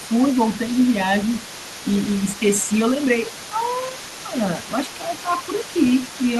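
A speech clip with two connected faults. A second, fainter voice is present from start to finish, sitting roughly 20 dB below the main speech. This is the other side's voice leaking through. The far end is being played on a loudspeaker near the microphone, and the echo canceller has likely left part of that playback behind. The leak runs the full length of the clip. Twice the main speech briefly dips, by around 5 dB. The first dip lasts from 0.00 to 0.05 s. The second runs from 2.62 to 2.71 s. Both are brief, well under a fifth of a second. This is speech suppressed in double talk. When both sides overlap, the canceller cannot tell the local talker from the echo. It likely turns everything down together, and the near voice loses level for that moment.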